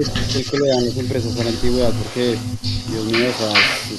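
Echo leak shadows the speech at 0.03–0.97 s, 1.19–3.11 s and 3.28–3.98 s. A copy trails about 0.41 s behind, quiet at first but louder than the speech by the end, likely from a far-end speakerphone whose echo canceller let its mic pickup back through.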